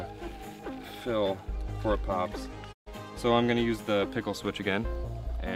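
The receiver briefly lost valid digital frames and muted until clean data resumed: a digital broadcast dropout from 2.72 to 2.88 s. The sound fades out over about 20 ms, leaving a 128 ms hole, which fits four lost frames, before returning mid-programme.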